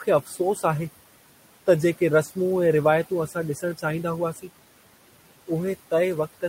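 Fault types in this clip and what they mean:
noise suppressor artifacts: Across the whole clip the background is pushed down by about 17 dB in the gaps, then swells back under the speech, so the room noise pumps in and out. This comes from a suppressor that judges, frame by frame, which frequency bands hold steady noise and turns those bands down, letting them back up whenever speech energy masks the noise.
speech cut by the noise suppressor: Three short stretches of speech go faint and swallowed, at 0.24 to 0.40 s, 3.56 to 3.84 s and 4.33 to 4.49 s, each dipping by about 11 to 13 dB for roughly a tenth of a second or a little more. Here the suppressor mistook quiet speech for the steady background and lowered it along with the noise.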